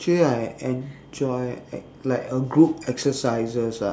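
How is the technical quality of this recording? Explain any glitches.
No glitches or audible technical faults are present here.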